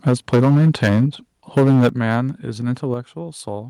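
A microphone input set too hot is the likely cause of the microphone overload in this speech: peaks run about 11 dB past the converter's limit from 0.06 to 1.04 s and about 10 dB over from 1.57 to 2.17 s. Their tops are flattened on roughly a tenth and then a seventh of samples, giving the loudest syllables a harsh, crackly edge. The call software, likely reacting to that clipping, stepped the microphone volume down three times: by about 3 dB at 0.09 s, about 10 dB at 1.89 s and about 5 dB at 2.94 s. Each step makes the voice and the background drop abruptly together, most plainly at 1.89 s, right inside the second distorted stretch.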